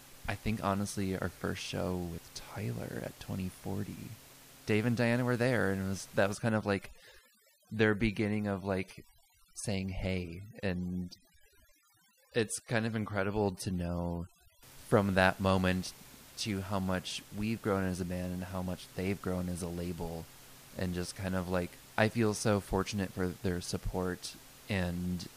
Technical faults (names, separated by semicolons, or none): overdone noise removal